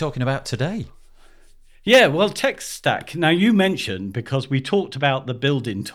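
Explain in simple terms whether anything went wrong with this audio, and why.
Near the end, from about 4.37 to 5.39 s, the speech turns dull and thin at the top. This is channel delay, causing comb filtering: one channel arrives a tiny fraction of a millisecond late, only a couple of samples, and when the two are mixed into one, parts of the sound cancel. Here the first cancelled frequency sits at around 10 kHz, so the crisp high edge of the speech fades.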